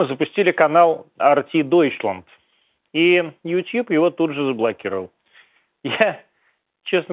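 A speech recording with no technical faults to report. It carries the narrow sound of G.711 mu-law telephone coding, with nothing above 4 kHz, which fits a sample rate of 8 kHz.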